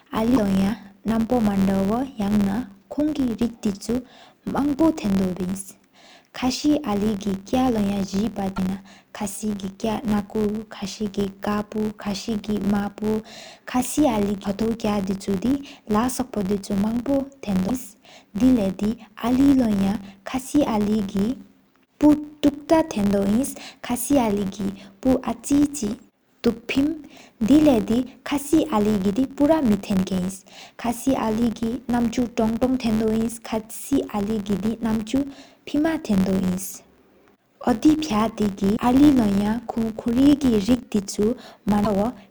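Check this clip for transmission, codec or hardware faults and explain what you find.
Three faults are present in this speech recording.

Throughout, a filter restarted on every block adds an 86.1 Hz buzz that follows the speech level. That rate fits a 512-sample buffer. Unlike hum, it rises and falls with loudness.

At 0.35–0.38, 8.56–8.59, 17.67–17.70, 38.75–38.78 and 41.84–41.87 s, short chirps or noise bursts are heard, likely from a broken MP3 bit reservoir. Post-cut frames read foreign bytes, adding garbage beyond a plain skip.

At 14.43 s, compressed frames were skipped. About ten 26.1 ms frames are missing, so the audio jumps ahead roughly 200 ms. Overlapping frames smear the join into a soft blip, not a click.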